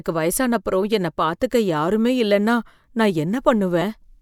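Compressed frames skipped at 3.81 s: the speech jumps ahead by roughly 50 ms, which fits two missing 24 ms frames.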